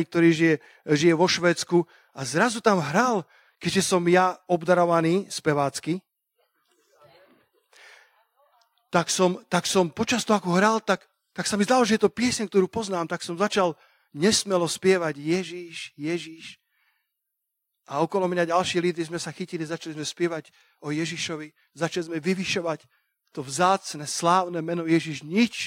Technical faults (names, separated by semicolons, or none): none